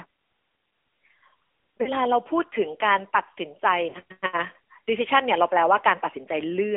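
A speech recording with a narrow, boxy telephone tone and a plainly audible buzzy, synthetic edge on the voice, the mark of the AMR narrowband mobile codec. Nothing sits below about 200 Hz or above about 3.4 kHz, and nothing could pass above 4 kHz anyway. The codec rebuilds the voice from a vocal tract model driven by a few pulses per 5 ms subframe, and at 10.2 kbps there are too few bits to hide that roughness. Two brief dropouts come at 1.82 to 1.91 s and 3.90 to 3.98 s, each a short smeared dip where the sound stretches and sags before the voice returns weak or rough for a moment. These are lost AMR speech frames, each gap about 40 ms, or two 20 ms frames. The decoder filled them by repeating the last good pitch and vocal tract settings at falling gain.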